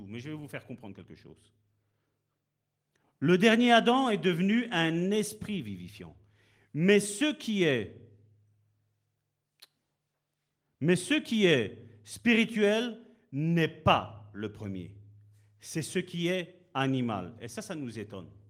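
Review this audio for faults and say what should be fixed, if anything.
Nothing needs fixing: the speech comes through the Opus voice compression at full bandwidth, and no faults are audible.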